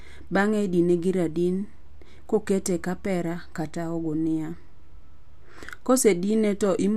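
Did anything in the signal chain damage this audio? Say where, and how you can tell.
No, nothing along the chain has left an audible mark on this speech recording, and the signal holds steady level and continuity throughout with no stage showing evidence of damage.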